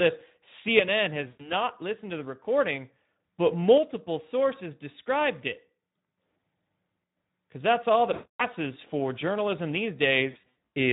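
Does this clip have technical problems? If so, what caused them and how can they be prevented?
Yes. Speex codec damage runs throughout: the speech sounds hoarse and noisy because a low bitrate, consistent with about 11 kbps, starves the excitation. Prevent it by using a higher Speex quality setting or a modern codec such as Opus.

VoIP packet loss concealed by the speech codec appears at 1.27–1.52 s, 8.13–8.41 s and 10.31–10.54 s. In each gap the decoder extrapolates from its last pitch and filter, producing a stretched, fading buzzy tone or coloured noise. The final gap consists of scattered short dropouts, the longest about 80 ms. Prevent it with a jitter buffer, forward error correction, or a more reliable network path.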